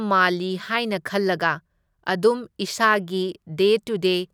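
No dropouts, distortion, noise bursts or timing errors can be heard anywhere in the recording, so there is nothing to report.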